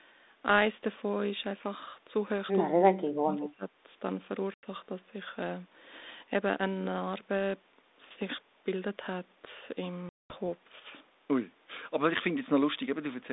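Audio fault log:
4.54 to 4.64 s, packet loss on an ADPCM call: a 90 ms hard-edged silence; the decoder's predictor and step size lose track, so sound resumes with brief distortion.
10.09 to 10.36 s, packet loss on an ADPCM call: a longer gap, roughly twenty packets dropped, then the same mistracked restart, distortion settling within tens of milliseconds.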